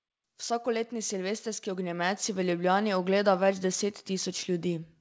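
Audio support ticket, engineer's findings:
Automatic gain rising, 0.63–2.61 s: speech and background noise swell together by about 7 dB over roughly two seconds. Probable component is the AGC stage, which judged the input too quiet and ramped its gain up gradually. The 8 kHz band ceiling comes from the call codec and fits G.722.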